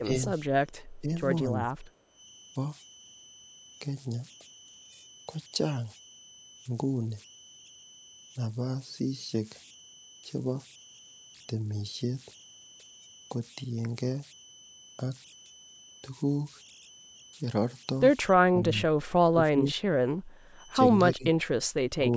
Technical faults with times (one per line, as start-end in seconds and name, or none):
0.00-22.16 converter idle tones
0.00-0.09 speech suppressed in double talk
1.00-1.09 speech suppressed in double talk
1.99-2.07 background gated by the echo canceller
18.47-18.98 speech suppressed in double talk
19.31-19.81 speech suppressed in double talk
20.21-20.54 background gated by the echo canceller
21.12-21.52 speech suppressed in double talk
21.98-22.07 speech suppressed in double talk